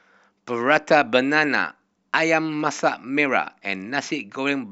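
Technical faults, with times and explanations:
No technical fault can be heard in the speech recording. There is nothing here that needs a time or an explanation.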